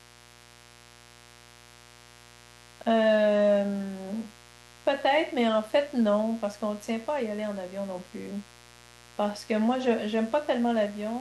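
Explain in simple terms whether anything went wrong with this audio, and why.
There's a mains buzz running under the speech the whole way through. Sharp electrical spikes from the 60 Hz power supply leaked into the recording, probably through a dimmer or poor shielding, leaving a steady, raspy buzz that sits beneath the talking.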